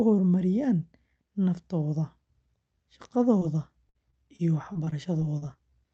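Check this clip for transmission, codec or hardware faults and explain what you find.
Two packet-loss faults affect the speech, both in the second half.

Short concealed packet loss, 3.39 to 3.43 s: about 20 ms of the stream arrived too late for the decoder, so the receiver extended the preceding sound for roughly 16 ms, following its pitch where voiced or shaping noise where not, then crossfaded back into the real signal. The hole is tiny, so it comes across as a brief smear or wobble rather than a dropout.

Repeated packet loss (robotic sound), 3.89 to 5.71 s: losses recur nine times across this stretch, totalling about 240 ms, the longest around 55 ms, with roughly 12% of the span filled by concealment. Each patch re-synthesises the last sound, and the next gap arrives before the speech settles, so the passage turns choppy, with fragments missing. The call codec, heard as band-limited to 8 kHz, fits Opus at around 32 kbps.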